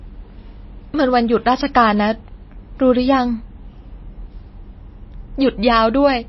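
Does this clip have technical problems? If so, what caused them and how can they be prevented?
Yes. MP3 compression runs throughout the speech, with nothing above 5.8 kHz and a plainly audible watery, swirly texture. This is likely a starved encoder cutting treble and dropping weak frequency lines frame to frame, which fits a bitrate around 24 kbps. To prevent it, encode at 128 kbps or higher, or keep a lossless copy.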